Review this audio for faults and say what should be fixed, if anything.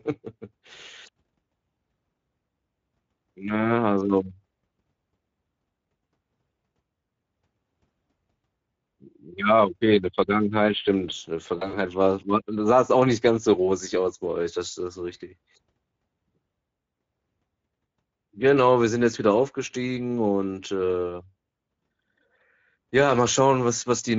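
The whole clip carries Speex codec damage. The speech sounds hoarse and grainy because there are too few bits for the excitation, and the highs are just a noise-like fill. That points to a mid-quality Speex mode around 16.8 kbps. The fix is to raise the Speex quality setting or switch to a modern codec like Opus.

Around 11.57 to 11.79 s, between "stimmt äh in der" and "war das mal sah", there's VoIP packet loss concealed by the speech codec. About 100 ms went missing across roughly 160 ms, with the longest gap near 60 ms. The decoder stretched its last pitch and filter while lowering the gain frame by frame, and the voice stays smeared briefly afterward. A bigger jitter buffer, FEC or a cleaner network path would prevent it.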